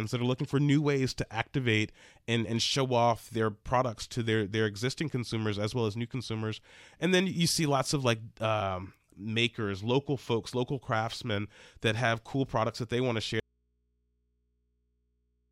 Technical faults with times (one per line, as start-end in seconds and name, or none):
13.40-15.51 audio dropout to a faint residue